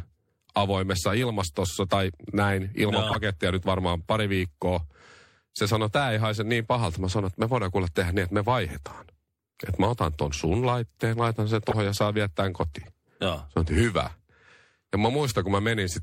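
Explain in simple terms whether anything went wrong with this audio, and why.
The whole recording sounds watery and swirly, with smeared edges. That is MP3 compression: likely too few bits, so quiet details flicker and the treble is cut.

Corrupt frames were decoded at 3.05–3.16 s after "ilmastossa tai näin ilman", 11.69–11.75 s after "sun laitteen laitan sen", and 12.82–12.89 s after "ja saa viettää". Damaged data was played anyway, giving short bursts of wrong sound. The last burst is much quieter than the other two.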